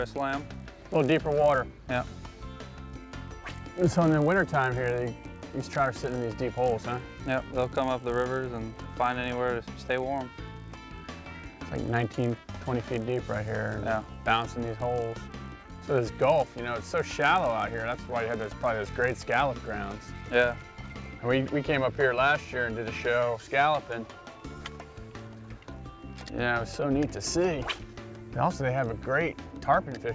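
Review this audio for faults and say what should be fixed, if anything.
A resampler restarted on every block runs from 0.0 to 21.1 s. Each 20 ms block is converted in isolation, so its edges carry a small error, giving a 50 Hz buzz that follows the sound, consistent with conversion from 44.1 kHz to 16 kHz. Run the resampler continuously across blocks, keeping its filter state between calls.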